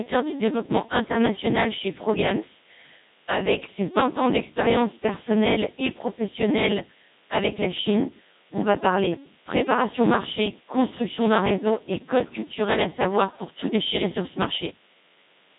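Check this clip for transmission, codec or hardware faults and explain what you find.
Three faults run through the whole speech clip, and two of them produce a buzz at the same rate.

DECT cordless phone buzz is present from start to end. A nearby DECT handset or base sends a radio burst every 10 ms. The audio circuit rectifies it into a thin, steady 100 Hz buzz rich in harmonics. It sits roughly 30 dB below the speech.

A block size mismatch (padded) also lasts the whole clip. One stage writes shorter blocks than the next reads, and zeros fill each remainder. That adds a tiny gap 100 times a second, giving a second 100 Hz buzz. The speech runs at 0.919 times normal speed, with timbre unchanged.

The Codec 2 vocoder shapes everything. It keeps only pitch, voicing, energy and a spectral envelope, then rebuilds the voice from sine waves. The result sounds heavily robotic and buzzy. Nothing remains above 3.8 kHz. 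The sound fits the 2.4 kbit/s mode.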